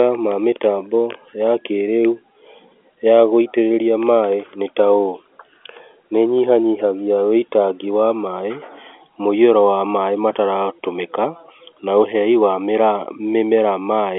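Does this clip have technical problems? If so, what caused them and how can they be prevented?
No, the speech comes through an ordinary G.711 telephone channel working as intended, confined to the usual 300 to 3400 Hz line band with nothing above about 3.8 kHz, and no technical problem can be heard.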